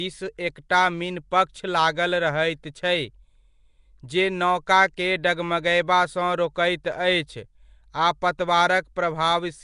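From start to finish the speech carries a rough, hissy halo. It also has a smeared, underwater quality. The codec damage is plainly audible. Nothing sounds above about 10.6 kHz. The likely cause is Nellymoser compression, the Flash microphone codec. It codes short blocks of samples with a fixed, small bit budget. Bands too weak to earn bits are filled with noise instead. That noise fill makes the hiss. The damage fits a rate near 44 kbps.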